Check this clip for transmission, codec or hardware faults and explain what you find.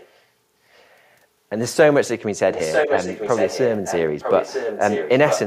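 One fault recurs across the clip: echo leak, in four stretches. From 0.0 to 0.22 s a faint delayed copy of the speech sits far below the main level. At 2.52 to 3.99 s, 4.2 to 5.1 s and 5.27 to 5.42 s the copy returns nearly as loud as the speech itself, trailing it by about 950 ms. The likely cause is a loudspeaker-side echo canceller that failed to remove what its microphone picked up, so that sound was sent back down the line.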